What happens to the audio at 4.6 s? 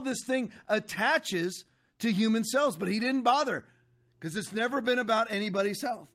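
Nothing goes wrong at 4.6 s; the speech carries on intact through that moment.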